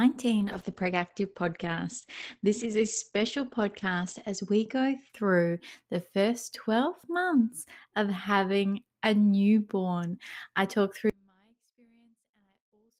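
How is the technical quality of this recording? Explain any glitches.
Two glitches stand out in this speech. Call bitrate drop, 0.4 to 5.15 s: the encoder got starved of bits and cut the top off at 8 kHz, sounding muffled and rough, consistent with a fall from about 32 to 14 kbps, until it recovers before "through the first". Audio dropout to a faint residue, 11.1 s to the end: right after "a newborn I talk" the sound abruptly vanishes, leaving a faint trace about 40 dB down, likely a lost input signal with the path still live.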